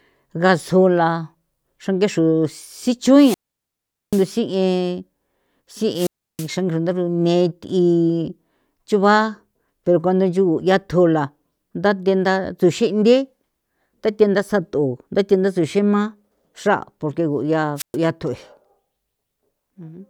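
At 3.15 s the speech breaks up in a wireless microphone squelch dropout lasting until 4.29 s. Hiss swells briefly, then the output goes near silent for about 0.79 s. The radio link has faded, and the receiver's squelch mutes it. The same happens from 5.94 to 6.49 s, with a 0.32 s hole. A last, shorter dropout falls at 17.76 to 17.97 s, muting for 0.12 s.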